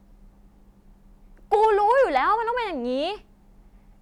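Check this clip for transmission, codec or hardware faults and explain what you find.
There's one fault, hard clipping from 1.53 to 2.17 s. The speech is driven about 4 dB past a stage's ceiling, so peaks get squared off and crackle harshly.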